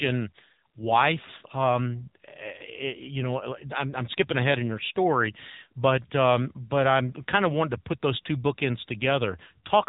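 Throughout, the speech passes through the AMR narrowband mobile codec. Nothing above 3.8 kHz survives, so it sounds thin and telephone-like. Each short frame rebuilds the voice from a few pulses. The result is plainly buzzy and synthetic, which fits a low mode near 8 kbps.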